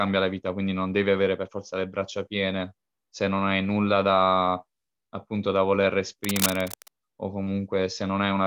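A speech clip with cable scratch noise from 6.24 to 6.88 s, right after "da appunto da voler". Dense, uneven scratching sits just below the speech. A worn cable or connector being moved is the likely cause.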